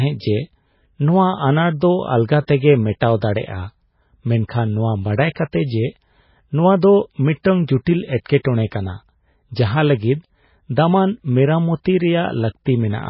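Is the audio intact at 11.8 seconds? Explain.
No. Pre-echo at 11.84 s: a short hiss of about 15 ms comes just before a sharp speech onset. The codec spreads quantisation noise across its whole block, so the noise meant for the loud attack also fills the quiet gap before it, and the onset sounds softened. The same stretch carries MP3 compression damage: nothing is left above 5.5 kHz, and the watery, swirly texture is likely caused by a very low bitrate, around 16 kbps, where weak frequency lines flicker on and off between frames.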